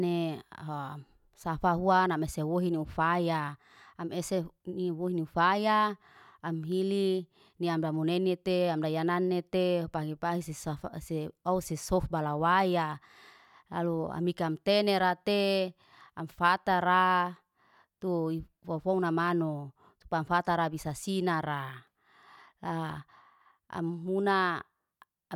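No technical faults are audible.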